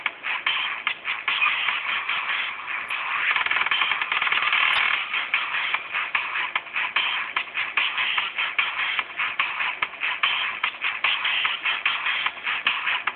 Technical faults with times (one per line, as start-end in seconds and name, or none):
2.81-3.18 DAB burbling
4.51-4.78 DAB burbling